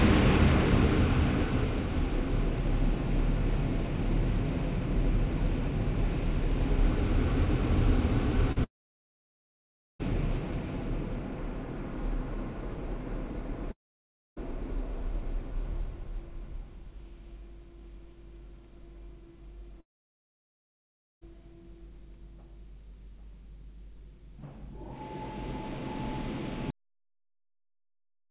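Doubled audio track, throughout: every sound in this everyday recording is followed by a second, full-band copy roughly 0.7 s later and about 5 dB quieter. The echo has no decay or room colouring, so it is not reverberation. Each event simply repeats, flat and intact. This most likely comes from the same signal being picked up a second time through a slower route, or from two out-of-step copies left in an edit.

Short concealed packet loss, 8.52 to 8.58 s: about 40 ms of audio failed to reach the decoder in time. The receiver stretched the preceding sound across the hole and blended back into the real signal, which leaves a brief smear or wobble.

Long network dropouts, 8.64 to 10.01 s, 13.71 to 14.38 s and 19.80 to 21.23 s: each begins with a short fading continuation of the last sound and then falls to near-silence. These gaps last about 1.4 s, 0.7 s and 1.4 s. The audio then resumes further along, with the missing stretch simply gone. 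The likely cause is that no packets arrived over those spans, so the receiver had nothing to play. All of this sits within a narrowband call sound with nothing above 4 kHz.

Cut-off end, 26.70 s: the audio halts in the middle of a sound and drops straight to digital silence with no decay, which remains until the file ends. The final buffers were never written out, so whatever was still playing is cut rather than allowed to finish.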